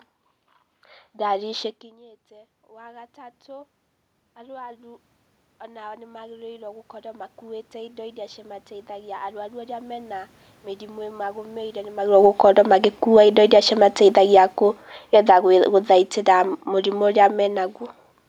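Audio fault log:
1.98–3.76 s, 4.46–8.45 s and 8.96–11.75 s: automatic gain rising. At around 1.5 s the voice drops by about 24 dB at the microphone, as if the talker leaned away. The automatic gain control hears a weak input and raises its gain in stages, by about 5 dB, then about 10 dB over four seconds, then another 5 dB. Because the gain applies to everything, the voice and the room noise swell together.
12.00–14.41 s and 15.01–15.38 s: automatic gain falling. Near 12 s the talker moves, and the gain control finds the input too loud. The gain control then pulls its gain down by about 6 dB over more than two seconds, and by another 5 dB in a quicker dip lasting under half a second. Each time the voice is loud at first and then sinks, with the room background sinking along with it, since one gain setting governs both.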